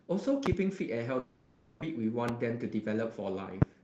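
At 0.46 to 0.55 s two loud pops in quick succession cut through the speech, which continues underneath. They peak about 20 dB above the surrounding level, and their likely cause is a sudden voltage step, such as from a switch, static or a driver glitch. A waveform shows two tall, narrow spikes. A spectrogram shows thin vertical stripes spanning the whole frequency range.

From 1.19 to 1.84 s a long network dropout takes out roughly 0.6 s of audio. In its place the last sound is stretched into a buzzy, hissy tail that fades over about 630 ms without ever reaching full silence. The speech then resumes further on, with the missing part simply gone. On a spectrogram the speech harmonics give way to a smeared, repetitive band that dims steadily before normal detail returns. The likely cause is that packets stopped arriving for that stretch.

A second loud pop, a single one, lands at 2.29 to 2.31 s. 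It is again about 20 dB above the speech and shows as one sharp spike and a full-height vertical line.

At 2.46 to 2.77 s a jitter buffer speed-up makes the speech run about 109% fast at unchanged pitch, so it sounds briefly hurried. The receiver trimmed around 40 ms in small pitch-period slices to shrink its backlog. A spectrogram shows the harmonics staying at the same height while syllables are slightly compressed in time, and a waveform shows tiny splice points between otherwise smooth periods.

A final single loud pop at 3.62 to 3.64 s, about 20 dB above the signal, looks and sounds like the earlier ones.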